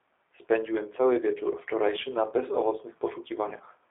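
Throughout the speech, the sound carries G.729 codec damage: the voice is rebuilt from a vocal tract filter, pitch predictor and sparse pulses, which fits an 8 kbit/s G.729A stream. It is plainly rough and synthetic, band-limited to roughly 300 Hz–3.6 kHz, with nothing above 3.7 kHz.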